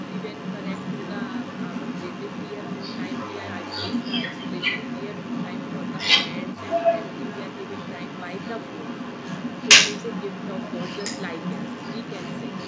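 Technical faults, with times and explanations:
Throughout, other side's voice leaking through: a second voice runs under the whole recording, sitting about 5 dB above the main talker's speech, so the two compete rather than one fading behind the other. The likely cause is the far end's audio playing from the talker's loudspeaker and reaching the microphone, with the echo canceller failing to fully subtract it. The call microphone processing's bandwidth limit, with nothing above 8 kHz, applies to both voices.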